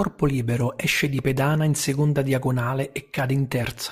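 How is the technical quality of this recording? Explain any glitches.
The recording has one clear fault, present throughout: crude rate conversion. The speech was resampled without a proper filter, which fits a 32 kHz to 48 kHz change, with samples simply repeated. That repetition adds inharmonic error roughly 25 dB below the speech. It sounds like a gritty fizz riding on louder, brighter sounds.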